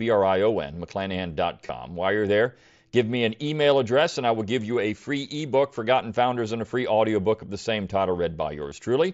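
Speech with three short buzzy, held-tone blips, each ending in a faint warble, at 1.67–1.69 s, at 4.14 s after "give me an email", and at 8.69–8.71 s after "of the same title". This is concealed Bluetooth headset packet loss. Dropped packets were patched by repeating the best-matching recent stretch of waveform.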